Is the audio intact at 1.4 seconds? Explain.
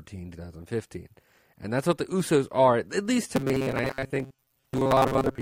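Yes, the speech at 1.4 seconds is intact, with no dropout, distortion or other fault at that moment.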